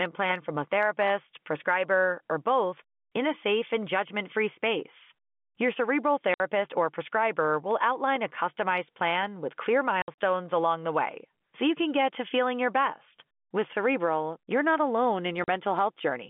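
At 6.34 s, just before "or prescriber", the speech drops out for 60 ms. This is packet loss filled with silence. The receiver had nothing to play, so it played silence. The hole has hard edges. A 60 ms gap fits three lost 20 ms packets.

From 7.71 to 8.38 s, between "or prescriber" and "plan with clear", four CD scratch ticks sound. The longest is about a millisecond. They come at roughly four or five a second, which matches the disc's rotation. The damage on each turn was more than error correction could rebuild. The player patched the bad samples, leaving short, regular clicks.

From 10.02 to 10.17 s, packet loss returns as a cluster. About 100 ms of audio is missing, scattered across 160 ms. The longest silent run is 60 ms. The sound stutters with several sharp holes. At 15.44 s, right after "not alone", a 40 ms gap cuts in, consistent with two lost 20 ms packets. These gaps sit in the narrow 200 Hz to 3.5 kHz telephone band of the G.711 line.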